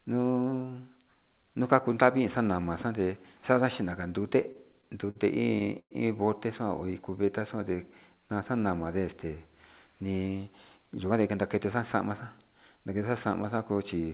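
Repeated stalls (stutter) run from 4.24 to 5.17 s, right after "xande xada chi". Late packets emptied the jitter buffer eight times, and each gap of up to 48 ms was filled by continuing the last sound. The speech drags and stutters, though nothing is lost.

A call audio freeze follows at 5.79 to 5.93 s. The speech halts for about 115 ms, 80 ms of it silent, then resumes where it stopped, likely because packets were held up in transit.

A jitter buffer slow-down from 6.85 to 8.62 s repeats pitch periods to rebuild the reserve, adding 165 ms. Speech runs at 91% speed with unchanged pitch and stretched sounds.

A jitter buffer speed-up from 10.51 to 12.84 s trims an overfull buffer by cutting short pitch-period pieces, roughly a fifth of a second in all. Speech runs about 8% fast and sounds hurried.

Throughout, the call path cuts everything above 4 kHz, which fits G.711 narrowband coding.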